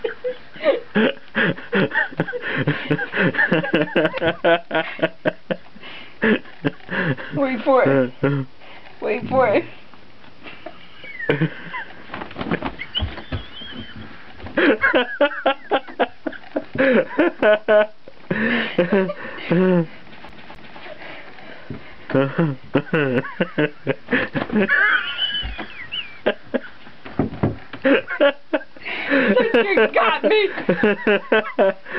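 At 20.29 s a CD stuck on one turn jumps the laser back, so a 258 ms slice plays twice with brief mutes, a quick even stutter ending at 20.81 s.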